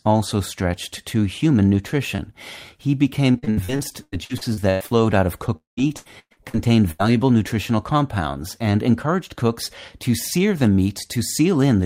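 Around 2.15 to 2.33 s, right after "also stretched to human", there's a short concealed packet loss. About 20 ms of the call didn't make it to the decoder in time, so the receiver patched the hole by carrying the last bit of sound forward for roughly 27 ms and then blending back in. You hear it as a quick little smear or wobble rather than a clean gap.

From 3.33 to 4.92 s things get rougher: repeated packet loss gives that robotic sound. There are 15 separate holes in that stretch, about 600 ms lost in total, the longest around 0.1 s. Each one gets patched by extending the previous sound, and the next drop arrives before the audio has recovered, so roughly 37% of the span is filled-in material. It comes across as choppy, with bits missing, leading up to "out of".

Just after "out of", from 5.56 to 5.79 s, the sound turns into a brief fading buzz or hiss and then goes quiet for about 140 ms. 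That's most likely a long network dropout. Nothing arrived for about 0.2 s, so the receiver extended the last sound, let it die away, and left silence until audio returned further along, minus the lost part.

Straight after that, 5.79 to 6.55 s brings another run of repeated packet loss: 7 gaps, about 300 ms missing, the longest around 0.11 s, with roughly 40% of the span concealed. It has the same robotic, broken-up quality as before.

Last, at 6.91 to 7.01 s, there's a burst of packet loss of about 80 ms. Several packets in a row went missing, so the receiver held the last sound and faded it out as a short buzz or hiss. Then it jumps ahead, and the audio that should have filled that gap is gone.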